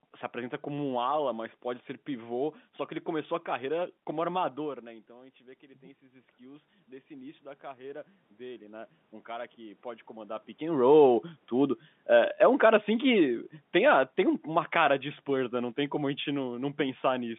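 At about 4.5 s the talker moves and the input drops by about 18 dB. Automatic gain rising follows from 4.63 to 10.46 s: the gain climbs about 12 dB, lifting voice and room noise together, but wins back only part of the lost level.

After the talker shifts again around 10.5 s, automatic gain falling runs from 10.66 to 17.32 s. The control lowers its gain by about 7 dB over several seconds, so the speech and its room background sink together.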